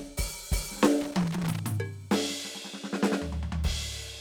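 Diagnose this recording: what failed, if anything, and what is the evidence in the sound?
The fault is in the analogue wiring: loose connector crackle. From 1.01 s to 1.59 s the music is broken by an irregular burst of crackle and scratching. A worn or dirty contact is making and breaking. Each break chops the signal and adds clicks.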